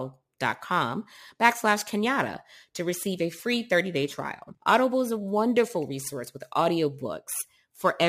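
Crude rate conversion runs through this speech clip. Samples are repeated without filtering, which fits a 44.1 kHz to 48 kHz change, leaving a gritty, inharmonic fizz roughly 25 dB down that follows loud, bright sounds.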